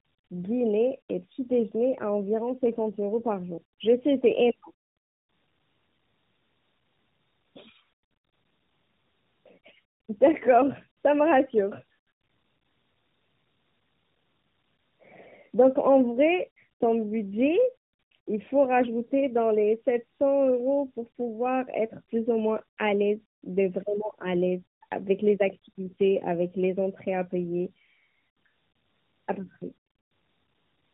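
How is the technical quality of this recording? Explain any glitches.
The quality is degraded throughout. Tandem speech coding runs the whole clip. The speech passed through two narrowband speech coders in a row, likely AMR-NB with a plain telephone link between them. The second coder reworked the first one's damage. Nothing remains above 3.8 kHz, so the speech sounds muffled, rough and warbly.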